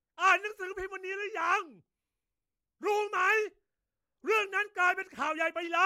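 Speech recording with no audible technical faults.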